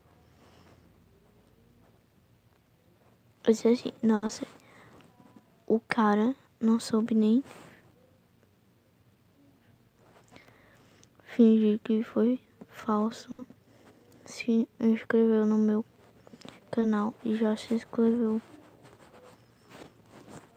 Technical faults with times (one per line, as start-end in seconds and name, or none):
4.15-4.24 short stall from a late packet
4.26-4.42 short concealed packet loss
9.04-9.79 jitter buffer speed-up
13.31-13.40 short stall from a late packet